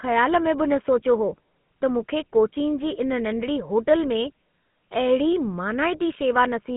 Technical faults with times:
0.00-6.77 GSM full-rate codec

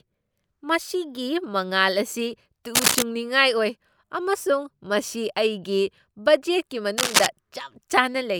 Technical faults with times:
2.75-3.07 cable scratch noise
6.98-7.26 cable scratch noise

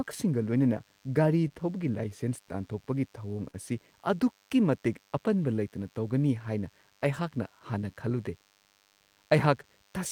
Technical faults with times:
0.00-10.11 DECT cordless phone buzz
0.00-10.11 clock drift between sender and receiver
0.10-8.95 repeated timing corrections
0.12-1.51 scattered short gaps
3.50-3.55 short stall from a late packet
5.56-8.29 scattered short gaps

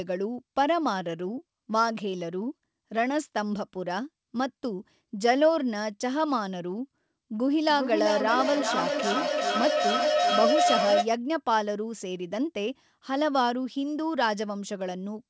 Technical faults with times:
7.33-11.14 feedback howl

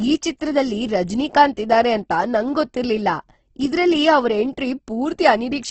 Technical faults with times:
0.00-5.70 Opus compression

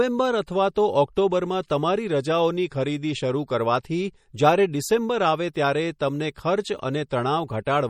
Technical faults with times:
0.00-7.89 MP3 compression

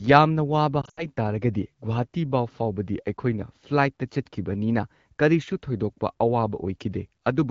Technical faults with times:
0.82-1.06 lost AMR speech frames

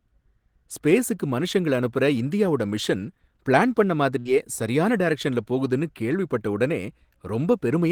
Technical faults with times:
4.19-4.27 burst of packet loss

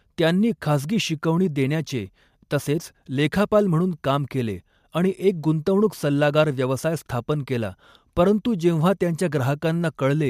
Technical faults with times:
none

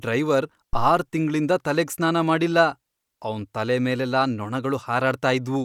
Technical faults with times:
0.73-0.94 phantom power thump

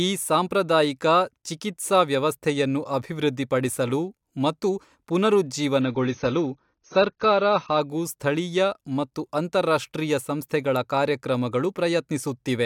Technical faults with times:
5.81-7.81 adaptive stream at a lower bitrate

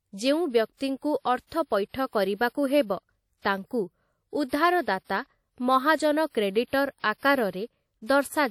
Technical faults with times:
0.00-8.51 WMA compression
7.18-7.23 pre-echo

